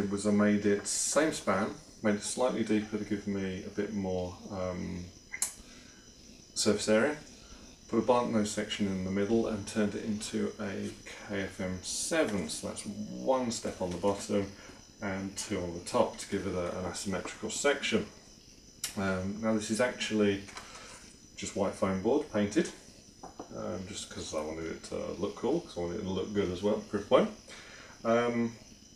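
No technical faults are audible.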